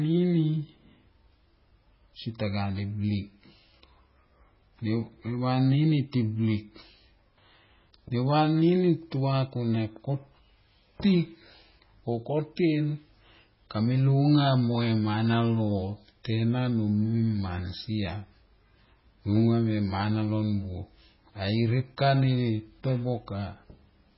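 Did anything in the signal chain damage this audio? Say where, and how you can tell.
Yes, and it's there from start to finish: the speech has a hard ceiling with nothing above 5.5 kHz, and the whole clip sounds watery and swirly, with s sounds turning into metallic chirps. That's the codec stage, likely heavy MP3 compression at a starved bitrate, roughly what you'd get around 16 kbps. Short of bits, the encoder chops the top end at a fixed point and drops weak frequency lines that flicker frame to frame.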